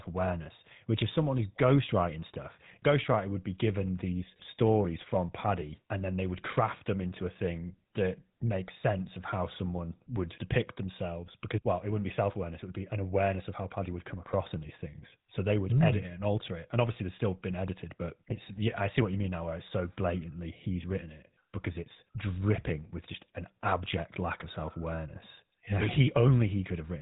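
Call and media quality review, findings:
GSM full-rate codec throughout the speech: buzzy, gravelly roughness, plainly audible, nothing above 3.8 kHz. Pulse-driven vocal-tract model at what sounds like 13 kbps, coarse excitation.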